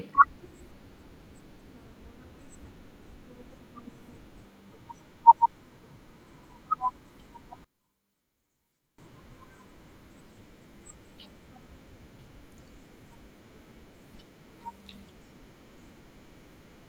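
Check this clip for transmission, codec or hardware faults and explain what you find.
One fault stands out. From 7.64 to 8.98 s the speech drops by about 25 dB to a faint copy, the likely result of one channel inverted: with one side's polarity reversed, the shared centre content cancels on mono summing, leaving only a faint inter-channel difference.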